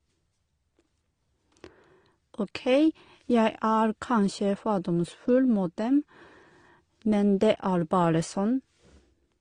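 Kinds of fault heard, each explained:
Transcoding between lossy codecs: The speech was likely encoded twice, first with an AAC-type codec and then re-encoded with Opus, both at low rates that point to around 32 kbit/s. The second encoder spends bits reproducing the first one's artefacts and then adds its own coding noise, so both sets of artefacts are heard together throughout. The lowest bandwidth limit in the chain persists, leaving nothing above 10.1 kHz and a dulled top end.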